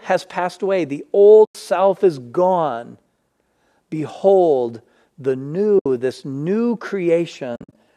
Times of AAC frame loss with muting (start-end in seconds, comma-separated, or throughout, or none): 1.45-1.55, 5.79-5.86, 7.55-7.75